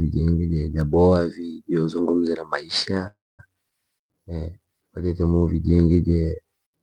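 Speech with a call audio freeze from 3.07 to 3.41 s. The last sound hangs as a fading buzz, then about 220 ms of silence. Speech resumes intact, now 314 ms late, likely from delayed packets emptying the jitter buffer.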